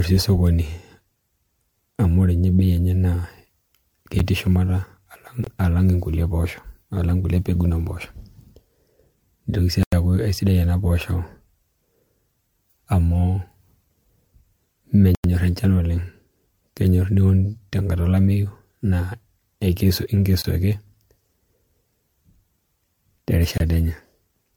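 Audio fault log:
throughout: generation loss; swirly, hollow, smeared speech with blurred attacks, likely from about five MP3 encodes at 96 kbit/s; the spectrogram shows scattered holes, with nothing above 20 kHz.
4.19, 5.44–5.47, 9.83–9.93, 15.15–15.24, 20.42–20.44, 23.58–23.60: block of digital silence; gaps of 10, 23 and 93 ms (the 23 and 93 ms gaps fitting 1024- and 4096-sample blocks), shown as flat silence in the waveform with abrupt edges and no fade.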